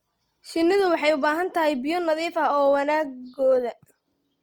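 Speech throughout, with plainly audible Opus compression in CELT mode: the sound turns grainy and rough, likely because a bitrate near 24 kbps leaves too few bits and bands get noise-filled. Unlike MP3, there is little swirling, and content reaches 20.2 kHz.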